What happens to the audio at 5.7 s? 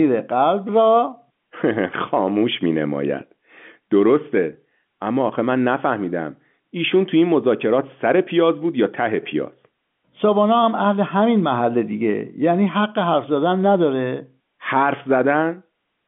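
Nothing goes wrong at 5.7 s: the speech carries straight through that moment intact, with only the narrow, band-limited character of G.711 telephone coding, which cuts everything above about 3.7 kHz.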